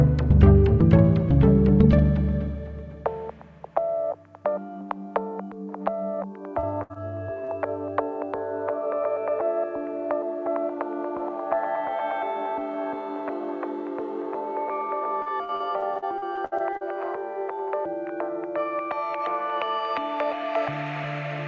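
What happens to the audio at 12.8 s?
Nothing goes wrong at 12.8 s: the audio there is intact, carrying only the steady band limit of the wideband call path, with nothing above 8 kHz throughout.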